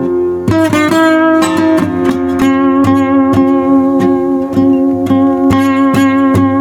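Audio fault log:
Throughout, gain pumping: the music's level swings by around 10 dB, leaving dynamics squashed. The likely cause is input gain set far too high, with a fast limiter clamping every peak.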